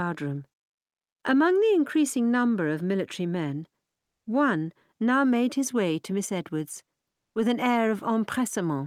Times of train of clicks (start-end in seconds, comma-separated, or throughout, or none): none